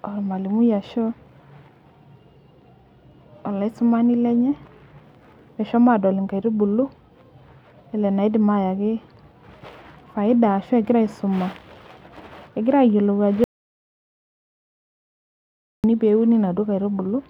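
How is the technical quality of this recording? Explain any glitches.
The recording has one clear glitch. Audio dropout to silence, 13.44 to 15.84 s: the speech stops abruptly and about 2.4 s of silence follows, with no room tone, before speech resumes mid-flow. The likely cause is a lost input while recording continued, writing silence, so that stretch is gone.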